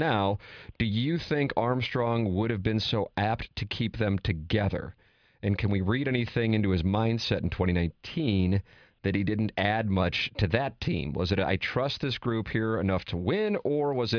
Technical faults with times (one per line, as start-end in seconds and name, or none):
none